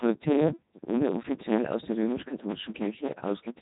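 A block size mismatch (truncated) runs through the whole clip. One stage writes longer blocks than the next reads, so each block's tail is discarded. That chops in a 109 Hz buzz and makes the speech run about 1.16 times fast with its timbre intact, which fits 512-sample blocks being cut short.

The Codec 2 vocoder also affects the entire recording, with heavy damage. The decoder rebuilds the voice from sine waves driven by pitch, voicing and a spectral envelope rather than the waveform, which sounds consistent with its top 3.2 kbit/s mode. The speech is robotic and buzzy, with nothing above 3.8 kHz.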